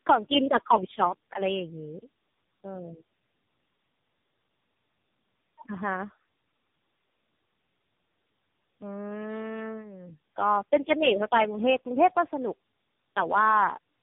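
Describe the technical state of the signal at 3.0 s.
Tandem speech coding is present throughout, including 3.0 s. Three chained speech codecs re-encode each other's losses, leaving the speech rough, warbly and muffled, with nothing above 3.6 kHz.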